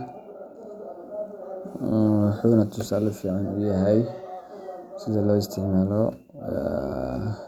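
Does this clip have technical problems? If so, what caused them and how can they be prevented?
No, the speech signal holds steady throughout, with no technical faults to trace or prevent.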